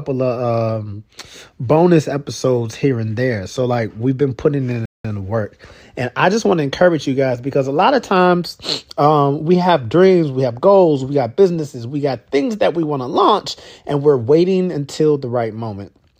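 The player's buffer ran dry partway through this speech clip, producing a rebuffering stall: playback halted while it waited for more downloaded audio, then carried on once data arrived. Right after "like we've been putting", the sound drops to silence from 4.86 s to 5.05 s and then resumes exactly where it stopped, so nothing is skipped or repeated, but the stall inserts about 0.19 s of dead air into the flow.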